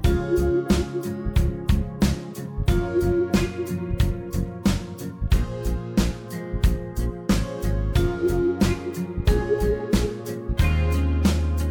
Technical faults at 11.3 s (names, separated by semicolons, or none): none